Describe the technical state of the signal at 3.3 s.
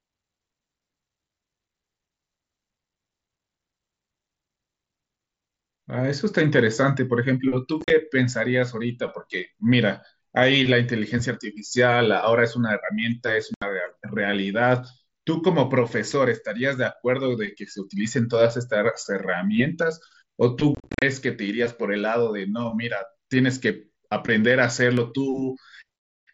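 At 3.3 s the speech is intact, with no fault at that moment, and it is carried by the Bluetooth mSBC headset codec working as expected.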